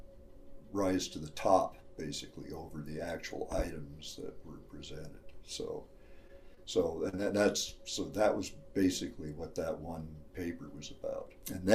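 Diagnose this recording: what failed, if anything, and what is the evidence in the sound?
Short concealed packet loss on the network path: packets missed the decoder's deadline at 6.27–6.31 s, 6.55–6.59 s, 7.09–7.15 s and 7.17–7.20 s, losing 20 ms each (40 ms at 7.09 s). The decoder extended the preceding sound across each gap, leaving brief smears and wobbles.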